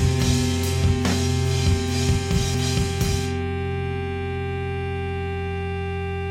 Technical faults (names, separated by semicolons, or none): damaged data in a compressed stream